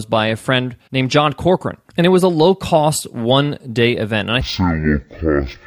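Speech, with stereo read as mono from 4.41 s to the end: interleaved channels play as one, so it runs at half speed, an octave low, with a faint mirrored copy in the spectrogram's upper half.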